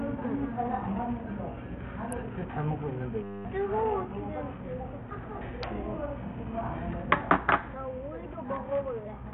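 Throughout, a heavily starved Bluetooth SBC link, likely running near 48 kbps, leaves a gritty, aliased sound with flickering treble and nothing above 18.6 kHz. From 3.24 to 3.45 s, a system hang loop freezes playback on a 10 ms buffer, turning about a fifth of a second into a steady 100 Hz buzz.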